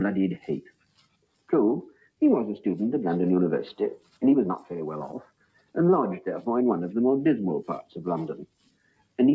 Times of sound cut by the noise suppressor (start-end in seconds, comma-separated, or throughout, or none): 0.38-1.51, 1.91-2.21, 3.98-4.22, 5.22-5.76, 8.44-9.19